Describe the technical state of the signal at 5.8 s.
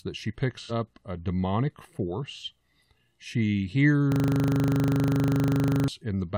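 At 5.8 s the speech is replaced by a rapid stutter at 25 Hz, one 40 ms fragment repeating over forty times from 4.12 to 5.88 s. This is a system hang loop: the system froze while the hardware kept replaying its ring buffer, losing about two seconds of audio.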